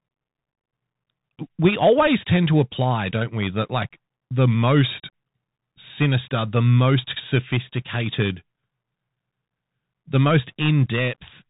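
Speech, and the whole thing has gone through a Bluetooth CVSD headset codec: nothing gets past about 3.8 kHz, sibilants come out scratchy, louder bright bits distort where the slope-tracking step can't keep up, and there's a grainy hiss underneath, which fits the 64 kbps one-bit delta scheme.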